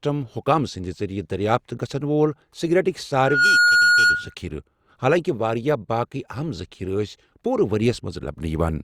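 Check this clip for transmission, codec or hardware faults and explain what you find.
One fault stands out: a loudspeaker feedback squeal from 3.13 to 4.35 s. A microphone is hearing its own loudspeaker, and at 1.4 kHz the loop gain exceeds one. That tone swells within about a third of a second into a steady squeal, around 10 dB louder than the speech.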